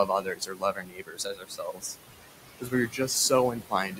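Noise suppressor artifacts run through the whole clip. The suppressor pulls the steady room noise, which sits about 12 dB below the speech, down by about 17 dB between phrases, so the noise sinks between the words and rises under them. A spectrogram shows a darker background between phrases where noise should be a smooth haze.

From 0.07 to 1.96 s, speech cut by the noise suppressor takes out roughly one and a half seconds in all. The suppressor mistakes quieter speech for noise and drops it by up to about 19 dB, so consonants and endings sound swallowed. Brief cuts follow at 2.58 to 2.73 s (about 17 dB) and 2.89 to 3.09 s (about 12 dB). On the waveform the envelope drops, and the spectrogram shows high-frequency detail vanishing in those spans.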